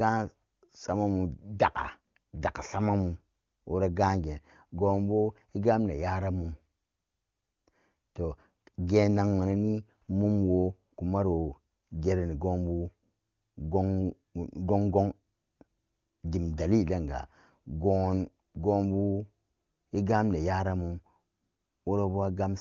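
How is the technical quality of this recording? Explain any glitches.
No glitches or faults heard.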